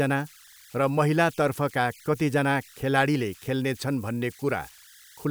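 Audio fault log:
Throughout, converter idle tones: a whistle near 1.5 kHz sits in the pauses of the speech, with a grainy hiss under the speech, about 28 dB below the signal. An undithered delta-sigma converter settles into repeating bit patterns on small inputs, and those patterns sound as tones.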